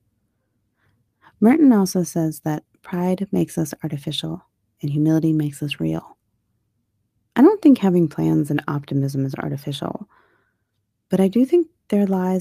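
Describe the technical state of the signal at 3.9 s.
At 3.9 s the speech signal is intact, with no audible fault at that moment.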